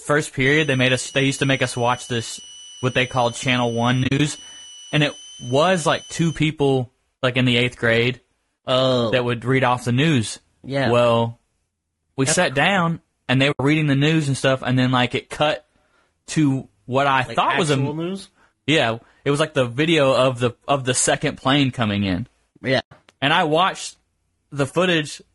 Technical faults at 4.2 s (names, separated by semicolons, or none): low-delay AAC compression; switching supply whistle; AAC frame loss with muting